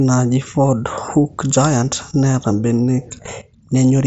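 No technical faults occur in this speech, which comes through a Bluetooth mSBC headset link that carries nothing above about 7.7 kHz.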